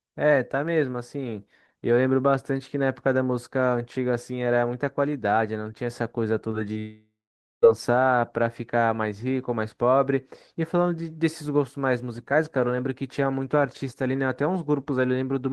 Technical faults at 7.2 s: long network dropout

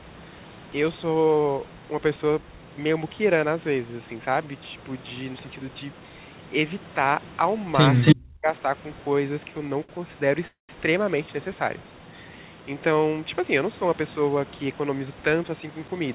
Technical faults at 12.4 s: none

